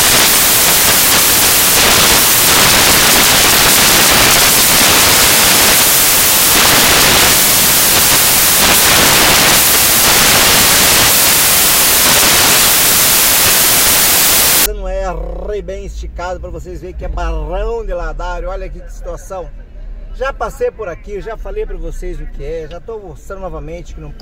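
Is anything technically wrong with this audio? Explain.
Yes. From 0.0 to 14.66 s the audio is buried under loud, harsh broadband noise, close to white on the loud passages. These are samples built from the wrong bytes: each value is assembled misaligned or byte-swapped, so the rapidly changing low bits dominate.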